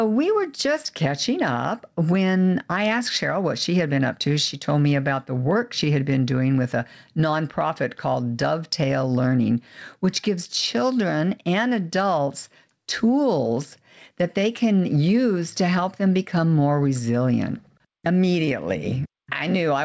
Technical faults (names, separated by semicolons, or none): gain pumping